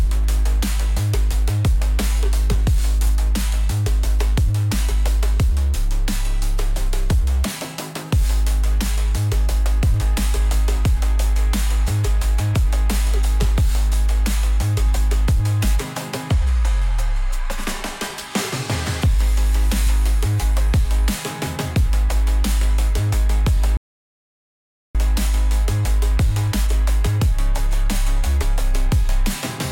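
At 23.77 s the input signal was likely lost, with the recorder continuing to write silence, an audio dropout to silence. The sound cuts off abruptly and returns at 24.95 s, leaving about 1.18 s of dead silence with no room tone, and whatever occurred there is gone.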